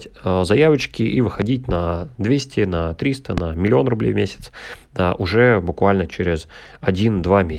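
Loud pops at 1.42–1.44 s, right after "заявочки и", and 3.38–3.40 s, just before "миллион рублей в месяц": single sharp clicks roughly 15 dB above the speech, likely voltage spikes, with speech continuing underneath.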